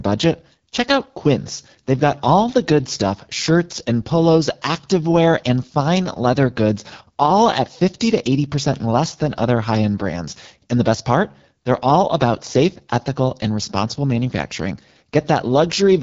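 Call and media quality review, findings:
AMR wideband (HD Voice) codec, throughout: rough, raspy speech, band ending near 7.3 kHz. Unlike narrowband, highs persist but are noise-filled, consistent with a low mode around 8.85 kbit/s.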